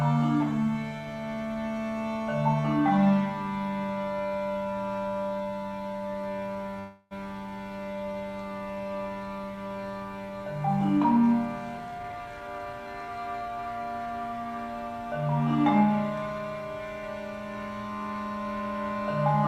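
At 6.79 s the sound stalls into a fading buzz until 7.13 s, then resumes where it stopped: a call audio freeze, likely from delayed packets emptying the jitter buffer. From 11.78 s to 14.07 s a jitter buffer speed-up plays the audio at about 114% speed without a pitch change, trimming roughly a third of a second of built-up delay.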